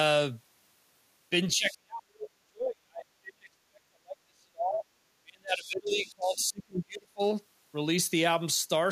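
From 1.53 to 4.87 s, the talker's speech is pushed down hard, by roughly 40 dB at its deepest. This is speech suppressed in double talk. It likely happens because both sides spoke at once and the echo canceller turned everything down.

It happens again from 5.22 to 7.22 s, with a drop of around 35 dB. The speech is turned down for about two seconds. The echo canceller likely could not separate the local talker from the loudspeaker echo.

Inside that second stretch, the other side's voice is leaking through. A faint scrap appears from 5.56 to 5.69 s, about 25 dB below the speech. A shorter fragment follows at 6.06 to 6.11 s, around 30 dB down. Leftover loudspeaker echo was likely not fully cancelled.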